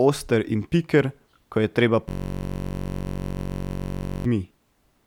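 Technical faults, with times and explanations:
2.09–4.25 s, system hang loop: right after "je treba" the system froze while the audio hardware kept replaying one 21.33 ms slice of its ring buffer, which fits a 1024-sample buffer. Repeating roughly a hundred times, the slice fuses into a steady buzz at 46.9 Hz.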